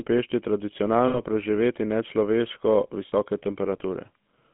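Throughout, the speech carries the buzzy, gravelly roughness of the GSM full-rate codec, which fits 13 kbps coding. The spectrogram shows a band from 150 Hz to 3.5 kHz, with nothing above it. Lost GSM frames cause a rough, metallic ring from 1.08 to 1.20 s (60 ms, which fits three frames) and from 3.08 to 3.13 s (40 ms). The last good frame is repeated, so the spectrogram shows smeared, repeated harmonics.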